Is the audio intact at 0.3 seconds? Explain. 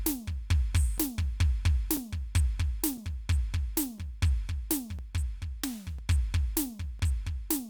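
Yes, the music plays cleanly through 0.3 s with no dropout, click, distortion or other fault at that moment.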